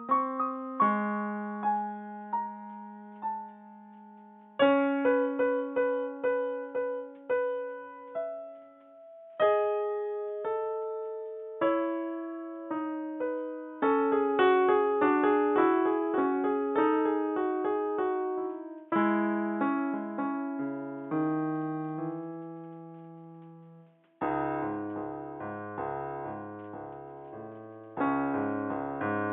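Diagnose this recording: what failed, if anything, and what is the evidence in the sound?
Nothing failed; no fault is audible anywhere in this recording.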